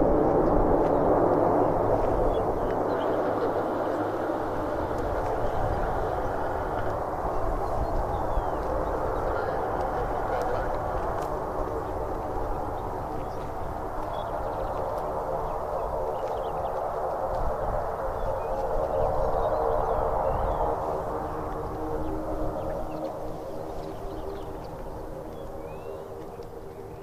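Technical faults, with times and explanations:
No technical faults are present in this clip.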